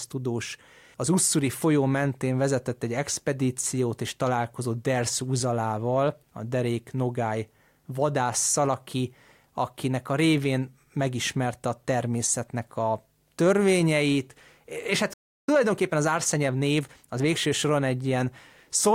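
A playback stall at 15.13 s cuts the speech off mid-flow into about 0.34 s of silence, likely because the player's buffer ran dry or its thread was blocked. Time-compressed catch-up follows from 15.49 s to 17.77 s. The player trims its backlog by splicing out short slices, so the speech runs about 1.15 times faster at normal pitch.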